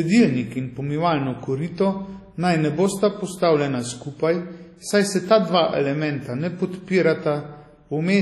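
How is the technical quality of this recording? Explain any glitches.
Heavily compressed throughout. The speech rings and sounds washy, with hiss that swells and fades with the voice, likely from WMA compression at a low bitrate around 32 kbps. A spectrogram shows nothing above 13.3 kHz and patchy, smeared blocks where weak components were zeroed.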